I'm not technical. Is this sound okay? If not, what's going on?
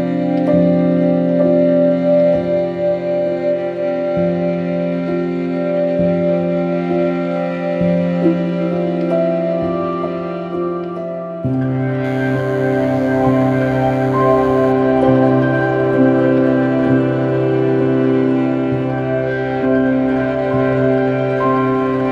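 No. From 12.04 to 14.72 s there is DECT cordless phone buzz: a nearby cordless phone's radio pulses, 100 per second, leak in as a thin, quiet buzz.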